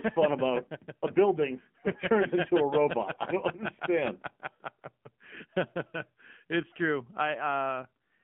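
From start to finish the speech passes through an AMR narrowband mobile codec, confined to a line band of about 150 Hz to 3.4 kHz. The codec rebuilds the voice from a vocal-tract model fed by sparse pulses, and its plainly audible buzzy, synthetic edge fits a low mode near 7.4 kbps. A simple band-limited telephone filter would muffle the voice without adding that coarse, artificial texture.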